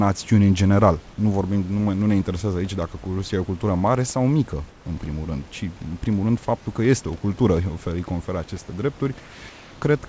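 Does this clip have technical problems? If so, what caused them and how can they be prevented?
Yes. In the pauses after "în general" (1.10–1.18 s) and after "cultură mare sau mică" (4.70–4.86 s), and again at 9.20–9.42 s and 9.50–9.82 s, the room background turns into a smooth, featureless hiss about 1 to 4 dB quieter. This is likely comfort noise in place of the background: the sender's voice detector stopped transmission, and the receiver filled each gap with synthetic noise. Unlike a dropout, the gaps never fall silent, and unlike packet-loss concealment, nothing is smeared or repeated. To prevent it, disable discontinuous transmission on the sending side.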